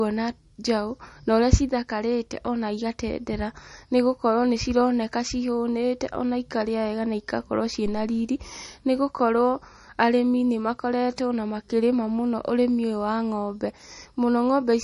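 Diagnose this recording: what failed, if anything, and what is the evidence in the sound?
The codec stage is at fault through the whole speech clip. Nothing is present above 11.1 kHz, and the damage is plainly audible. The sound is watery and swirly, s sounds chirp metallically, and attacks smear. The likely cause is MP3 compression at a low bitrate, roughly 40 kbps. Starved of bits, the encoder cut the treble at a fixed point and dropped weak frequency lines that flicker from frame to frame.

The analogue wiring stage failed briefly. Just after "wega na igakorwo ciĩ", a deep phantom power thump runs from 7.86 to 8.14 s. It dies away in about 63 ms. Power was switched on or off on a live input. That sudden voltage step passed through the coupling capacitors as one low-frequency pulse, which the input captured along with the speech.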